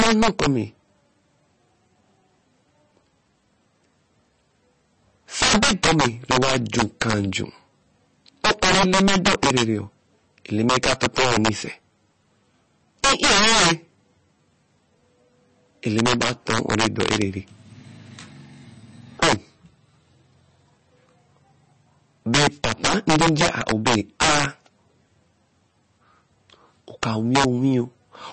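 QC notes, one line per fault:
Throughout: integer overflow. The speech is driven about 17 dB past the integer limit, and roughly 3 percent of samples wrap to the opposite sign rather than being limited. Each overloaded peak jumps across the full range, giving cracks and a tearing buzz on loud syllables, sharper than ordinary clipping.
Throughout: MP3 compression. The sound is watery and swirly, with plainly audible smearing and nothing above 8.3 kHz. The likely cause is low-bitrate MP3 encoding, in keeping with 32 kbps, where weak frequency lines are zeroed frame by frame and the treble is cut off.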